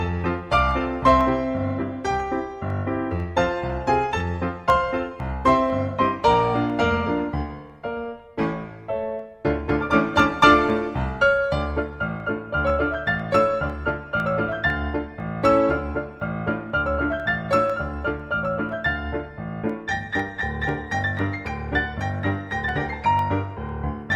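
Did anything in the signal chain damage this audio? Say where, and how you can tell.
Yes, at the USB or driver stage. Periodic USB or driver dropouts cause ticks every 0.5 s from 0.21 s to 23.69 s, about fifty in all. Each time, a tiny sliver of audio, well under a millisecond, is skipped as the bus or driver stalls.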